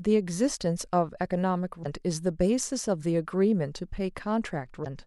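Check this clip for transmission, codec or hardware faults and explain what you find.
Two short faults appear, both damaged data in a compressed stream. They occur at 1.82–1.86 s and 4.82–4.86 s. Corrupted bytes break decoder sync, producing a brief chirp or blip.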